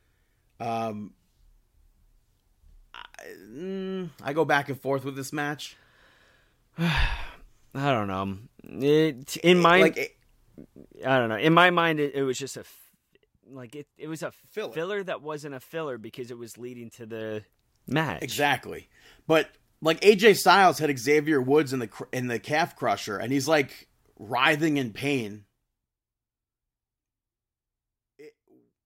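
A speech clip with zipper noise from 11.47 to 12.63 s, just after "I don't know": the level drops about 15 dB in 2 dB steps, roughly seven per second, each unsmoothed step ticking audibly. A waveform shows a staircase envelope; a spectrogram shows faint vertical lines at each step.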